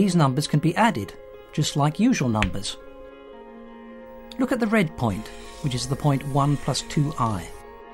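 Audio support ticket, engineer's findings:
No audible faults found; nothing to escalate.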